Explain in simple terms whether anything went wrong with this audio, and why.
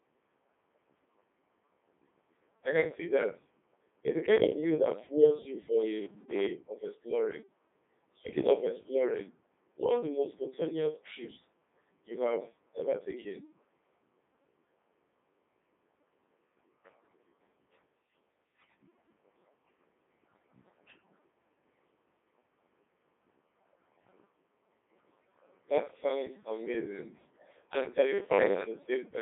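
Two things went wrong. Throughout the recording, the speech has passed through the Codec 2 vocoder, a very low-data digital-radio codec. Instead of keeping the actual waveform, it sends only a rough description: pitch, whether the sound is voiced, loudness, and the broad shape of the tone. The receiver then rebuilds the speech from simple sine waves. The result here is heavily damaged, with a robotic, buzzy quality and nothing above about 3.8 kHz, so it sounds thin, like a narrow radio link.

Near the end, from 28.13 to 28.60 s, right after "sounds amazing and", the speech collapses into a rigid, metallic buzz at a steady 100 Hz. This is robotic sound from repeated short buffers. The likely cause is new audio arriving too late, so the software kept replaying the last tiny slice, about 10 ms long, to fill the gap. Most of that half-second is repeats rather than real speech, which is why it drones at one fixed pitch.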